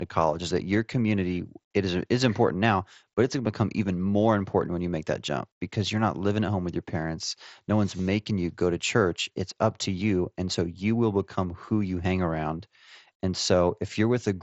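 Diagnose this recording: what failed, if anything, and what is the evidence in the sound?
Concealed Bluetooth headset packet loss, at 7.98 to 8.05 s and again at 11.66 s, happens on the wireless link between headset and phone. In the first event, about 45 ms of audio drops out in pieces across 75 ms, the longest gap about 22 ms, and each hole is filled by repeating the best-matching recent stretch of waveform, giving a brief buzzy, held tone and a slight warble as real sound resumes. The second loss is about 15 ms. The wideband mSBC band limit near 8 kHz is audible throughout.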